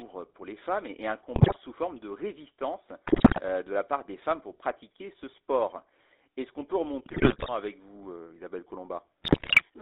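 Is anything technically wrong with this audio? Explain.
Yes. The whole recording has passed through a GSM full-rate codec, limited to roughly 300 Hz to 3.7 kHz. The coder rebuilds the voice from a vocal-tract filter excited by sparse, regular pulses, which fits the 13 kbps full-rate scheme, leaving a plainly buzzy, gravelly roughness and no top end.

GSM bit errors occur at 1.36 to 1.56 s (after "les femmes et un", before "forme de résistance de"), 3.06 to 3.41 s (after "forme de résistance", before "de la part des"), 7.06 to 7.49 s (after "qu'on peut") and 9.22 to 9.64 s. Corrupted filter, pitch and gain values throw frames off, so the voice breaks into squawks, pops and gargling bursts.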